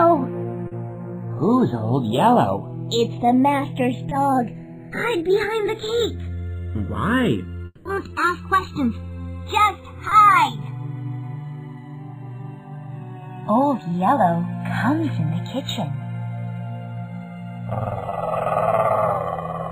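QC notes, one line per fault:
Throughout, channels drifting apart: the two channels run on separate clocks, off by something like 70 parts per million, so the delay between them creeps up to roughly a millisecond and a half by the end. Summed to mono, comb notches sweep slowly through the spectrum. It is heard as a slow flanging.
0.67 to 0.73 s, 4.09 to 4.13 s, 10.09 to 10.13 s and 18.09 to 18.13 s, short concealed packet loss: 40 ms of audio goes missing at the first point and 20 ms at the others. The receiver fills each gap by extending the preceding sound, then blends back in. Each is a brief smear or wobble.
7.65 to 7.87 s, long network dropout: 200 ms never arrives, likely from a network stall. The receiver stretches the last sound into a fading buzz or hiss, with about 20 ms of silence at the tail. The audio then resumes with that stretch gone.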